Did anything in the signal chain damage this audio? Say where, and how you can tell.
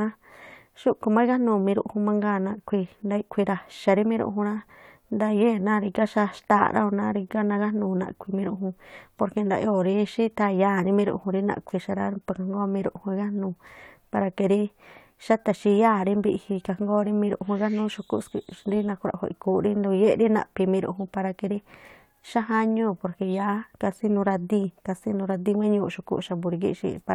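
No, nothing I can hear in this speech recording points to damage anywhere along the chain, so there's no stage to single out.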